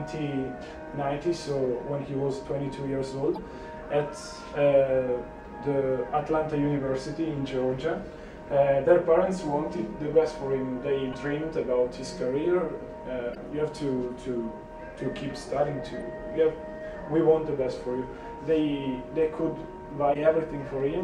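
Damaged data in a compressed stream makes the decoder misread corrupt frames and lose sync while it hunts for the next valid header. Each event is a brief chirp or blip of about 50 ms, at 3.33–3.39, 11.09–11.15, 13.31–13.37, 15.98–16.02 and 20.10–20.16 s.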